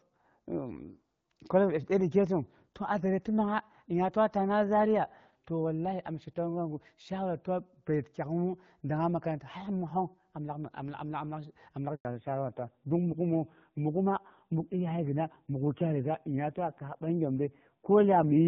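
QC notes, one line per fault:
11.95 to 12.05 s, handover gap: The sound cuts out for about 100 ms. The call is being passed from one network to another, and no frames arrive during the switch. The signal fades within tens of milliseconds, then silence holds until the new link carries audio again.
12.05 s to end, fallback to narrowband: Right after the gap, everything above 4 kHz disappears and stays gone. The call has dropped from HD Voice, which before this point is light and clear, to a narrowband codec. The rougher, duller grain points to AMR-NB at a low rate, around 5.9 kbit/s.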